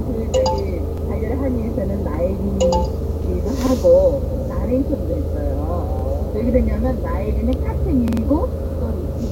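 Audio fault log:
0.36 s and 7.53 s: electrical switching spike. Each is a sharp snap sitting on top of the sound, lasting barely a moment. The likely cause is a nearby switch, motor or static discharge arcing briefly, with the audio line picking up the burst.
0.98–1.02 s, 3.67–3.72 s, 5.99–6.04 s: repeated buffer. The same 46 ms piece plays twice, with a hard join where it restarts. Fresh audio arrived late, so the last buffer replayed. The length fits a 2048-sample buffer. It sounds like a quick stutter.
8.08–8.22 s: repeated buffer. The same 46 ms piece plays three extra times, so the stutter is longer. Each restart adds a hard join. Nothing appears to be skipped afterwards. The sound simply resumes once new audio arrives.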